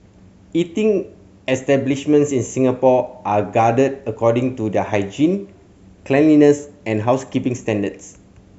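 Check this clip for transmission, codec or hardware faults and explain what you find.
One fault runs through the whole speech clip: a resampler restarted on every block. The 48 kHz to 44.1 kHz conversion was run on each 20 ms block separately, so at each block edge the filter lacked the true neighbouring samples and left a small error. Those errors repeat at 50 Hz, heard as a buzz riding on the speech. Unlike 50 Hz mains hum, it vanishes in pauses, because the edge errors scale with the signal.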